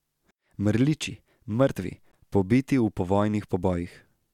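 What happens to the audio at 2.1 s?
At 2.12 s the speech drops out for about 16 ms. That is a gap between stream segments: at what sounds like a 2-second segment boundary, the timing of the next segment starts slightly late, and the player fills the space with silence. Nothing is lost, but the speech is pushed about 16.5 ms later. It sounds like a brief hard tick or stutter. On a waveform it shows as a flat, sharp-edged notch. A spectrogram shows a thin vertical blank strip across all frequencies.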